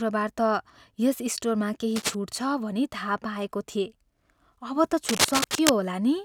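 Scratchy, rustling bursts cut across the speech from 1.95 to 2.15 s, a little below the speech level, and again from 5.04 to 5.79 s at about the same loudness as the speech. This cable scratch noise is likely a worn cable or connector shifting, rapidly changing its contact resistance.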